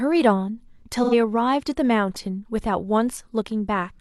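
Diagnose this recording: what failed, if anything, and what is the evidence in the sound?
The failure is at the codec stage: AAC frame loss with concealment. Between 1.03 and 1.14 s, about 85 ms of the speech stream went missing, which fits two consecutive lost frames. The decoder bridged the gap by reusing the last good spectrum with randomised phase and estimated energy. The result is a brief smeared, noisy, phasey patch in the speech rather than silence, because the loss was too short for the concealment to fade out.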